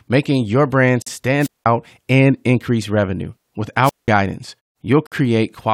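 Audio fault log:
1.02–1.07 s and 5.07–5.12 s, gap at a join of encoded pieces: the sound breaks for 44 and then 53 ms, four seconds apart, first right after "making your brand". Separately encoded chunks were joined with their start-up delay and end padding left in.
1.39–1.66 s and 3.82–4.09 s, wireless microphone squelch dropout: the radio link fades, hiss swells briefly, and the receiver's squelch mutes the output for about 196 and 187 ms. The first hole falls between "making your brand" and "and increase revenue".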